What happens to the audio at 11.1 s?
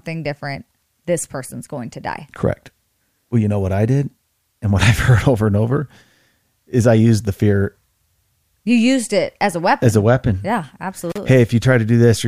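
An intermittent contact fault runs from 11.10 to 11.18 s: a loose cable or plug briefly breaks the signal path, so the speech cuts out for about 37 ms. Scratchy crackle at each edge of the gap, as the contact opens and then reconnects, and faint hiss in place of silence, distinguish this physical break from a digital dropout or packet loss, which leaves a clean, abrupt hole.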